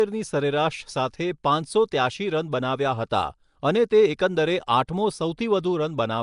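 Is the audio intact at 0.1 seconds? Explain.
No. From the very start, and so at 0.1 s, the speech has likely passed through Nellymoser compression, the old Flash microphone codec. It codes short blocks with a fixed, thin bit budget, gives weak bands no bits and fills them with noise, here consistent with a rate around 44 kbps. The damage is plainly audible: a rough, hissy halo around the speech, a smeared underwater quality, and nothing above 10.6 kHz.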